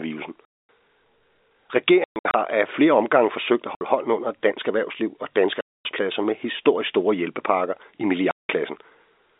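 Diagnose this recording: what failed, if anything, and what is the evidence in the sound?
The network stage failed: packet loss filled with silence. There are hard-edged holes at 0.45, 2.04 to 2.34 (scattered), 3.75, 5.61 and 8.31 s, for example before "hånden under dansk erhvervsliv". Their lengths are multiples of 30 ms packets, unlike concealment, which would smear rather than cut.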